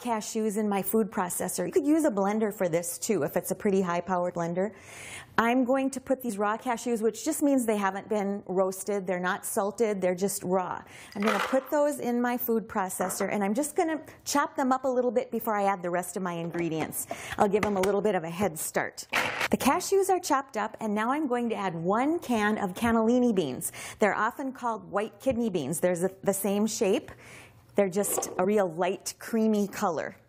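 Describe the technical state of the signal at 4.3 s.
At 4.29 to 4.31 s, compressed frames are skipped: roughly 70 ms of audio never plays, which fits about three missing 23.2 ms frames. The audio jumps ahead at the join, seen as a brief discontinuity in the waveform.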